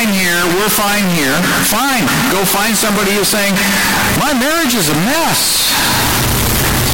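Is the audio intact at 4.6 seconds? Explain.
No, at 4.6 seconds the speech is hit by the same float-read-as-integer fault that runs through the whole clip. It's likely 32-bit float samples being read as 32-bit integers, so the sign and exponent bits drive the level. You get a near-square, harsh, very loud waveform at an almost fixed, high level, with the background noise as loud as the speech, though the pitch still comes through.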